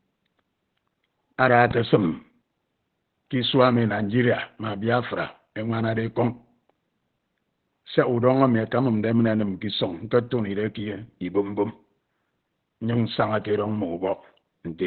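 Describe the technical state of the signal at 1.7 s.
From 1.71 to 1.73 s a single loud pop, likely a voltage spike, sits about 10 dB above the speech, showing as a narrow waveform spike and a full-height vertical line. Opus compression in SILK speech mode, likely from a low bitrate around 12 kbps, leaves the sound muffled and hoarse, with a spectrogram empty above 4.4 kHz.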